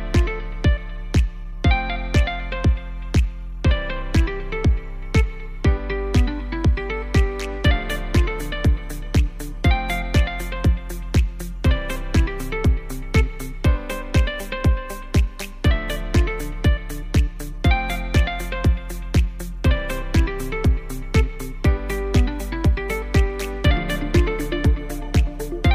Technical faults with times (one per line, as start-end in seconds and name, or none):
none